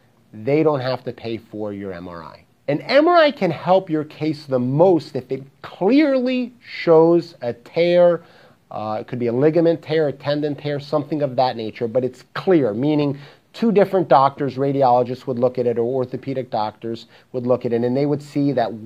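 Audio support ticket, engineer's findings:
No faults found.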